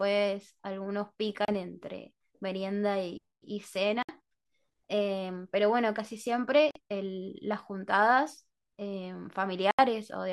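The speech cuts out four times: at 1.45 to 1.49 s, 4.03 to 4.11 s, 6.71 to 6.79 s, and 9.71 to 9.80 s, each a hard hole of roughly 30 to 75 ms. These are most likely Bluetooth dropouts, where packets miss their delivery window and get discarded, so output goes dead until fresh ones arrive. The speech picks up further along each time, as if it had run on during the silence, and the gap lengths fit two to five lost packets.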